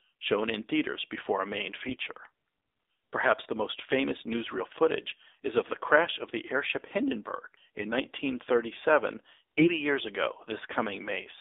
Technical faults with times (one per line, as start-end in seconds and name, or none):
0.00-11.40 AMR narrowband mobile codec
1.82-1.97 AMR bit errors
9.58-9.68 AMR bit errors